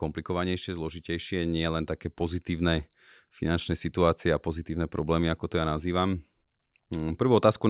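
Speech, carried over a call path whose cutoff at 4 kHz points to a narrowband G.711 codec. Automatic gain rising: the gain control judged the input too quiet and lifted its gain by about 6 dB, so from 0.35 s to 7.25 s voice and background swell together slowly.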